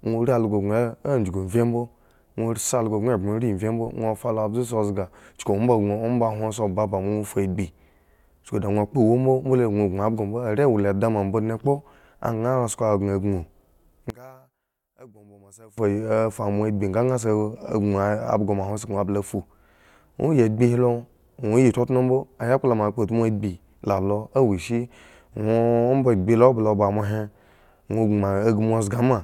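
One channel inverted, from 14.10 to 15.78 s: the speech abruptly drops by about 26 dB and nearly disappears, leaving only a faint trace before full level returns. The likely cause is one stereo channel flipping polarity for that stretch. When the two channels are summed to mono, the centred voice, which is almost identical in both, cancels itself out. All that survives is the small difference between the channels.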